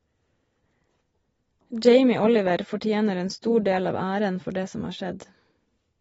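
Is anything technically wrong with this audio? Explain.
Yes. Throughout the speech, AAC compression damage is plainly audible. Nothing remains above 7.7 kHz, so the sound is dull. The encoder has likely starved its frequency lines of bits, which fits a low bitrate near 24 kbps. Sibilants turn fizzy and smeared.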